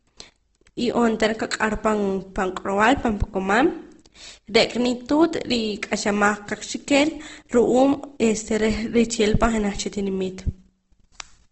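From start to finish the speech sounds rough and grainy, with a noisy, hashy texture over the voiced sounds. Nothing is heard above about 8.2 kHz, so the top end is dull and sibilants lose their edge. This is Opus compression, likely in its music mode at a low rate, which fits a rate around 16 kbps. Short of bits, the encoder fills bands with folded or noise-like content rather than leaving them empty, hence the grain.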